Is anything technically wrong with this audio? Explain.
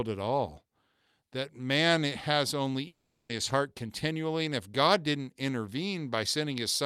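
Yes. From 2.87 to 3.31 s the speech cuts out, decaying into a fading buzz and then 170 ms of silence. The 420 ms lost there never returns, likely a long network dropout masked by the receiver.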